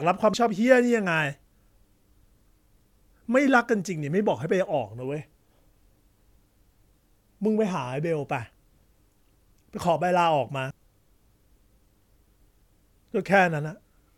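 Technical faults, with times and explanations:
0.34 s and 10.70 s, compressed frames skipped: the speech jumps forward, losing around 150 ms at the first point and around 200 ms at the second. That fits whole blocks of about five and seven 32 ms frames that were never played.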